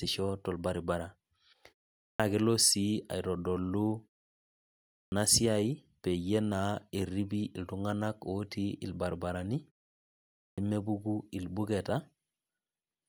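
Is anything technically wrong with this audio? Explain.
Yes. Three times the speech resumes with a clipped start after a pause: at 2.05 to 2.20 s, about 146 ms after a 0.39 s gap; at 4.97 to 5.12 s, about 150 ms after 0.96 s; and at 10.44 to 10.58 s, about 136 ms after 0.81 s. The output path sleeps through each silence and is still waking when sound returns, so the opening sounds are swallowed and words snap in abruptly. On a waveform the envelope jumps from flat silence straight into the speech with no onset ramp. A spectrogram shows a hard vertical edge where the initial energy should build.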